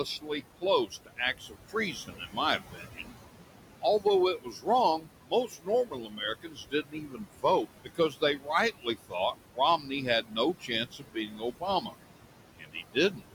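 It's a speech clip with noise suppressor artifacts all the way through: the room noise, sitting about 12 dB below the voice, gets pulled down by about 18 dB between phrases and pumps back up under them. There's also speech cut by the noise suppressor, where it mistakes quiet bits of voice for noise and ducks them about 17 to 19 dB. This happens from 0.05 to 3.12 s (about a second in total), from 3.82 to 11.95 s (about three seconds), and from 12.59 to 13.22 s (a few tenths), so soft endings come out swallowed.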